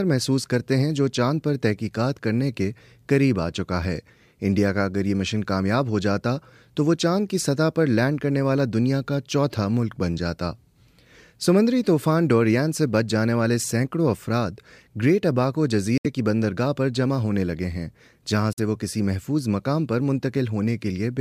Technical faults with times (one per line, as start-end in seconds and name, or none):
15.98-16.06 Bluetooth dropout
18.53-18.59 Bluetooth dropout